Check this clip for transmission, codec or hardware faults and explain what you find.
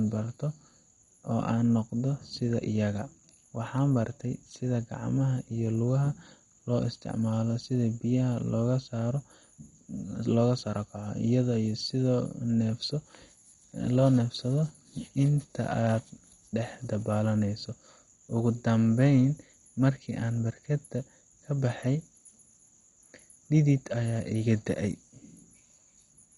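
The clip has one codec fault, running throughout the speech. From start to finish the sound is dull and muffled, with a gurgling, granular roughness and nothing at all above 11.2 kHz. This is likely MP2 compression at a heavy setting. MPEG Layer II splits the signal into 32 sub-bands and rations bits among them. Starved of bits, it shuts off the upper bands and quantises the remaining ones coarsely, which fits a rate of about 56 kbps.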